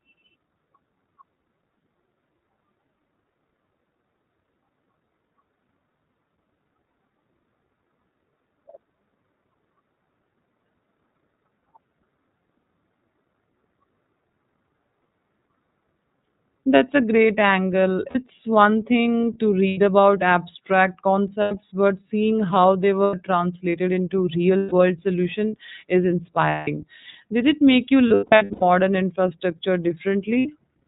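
From start to finish the speech is muffled, with nothing above 4 kHz, and has a rough, slightly synthetic edge. That is the iLBC codec, a narrowband VoIP coder. The texture fits the 13.33 kbps mode with 30 ms frames, each frame's excitation coded on its own, which trades naturalness for clarity.

From 18.09 s onward, short stretches of held, buzzy, breathy vowel replace the speech at 18.09, 19.68, 21.42, 23.04, 24.57, 26.49, 28.08 and 30.39 s. The voice snaps back cleanly after each. These are lost iLBC frames. The decoder fills each gap by repeating the last pitch cycle mixed with noise. Most gaps last 60 to 90 ms, those at 24.57 and 26.49 s last 150 and 180 ms, and the one at 28.08 s totals about 390 ms spread over 0.54 s, with no single run much beyond 100 ms.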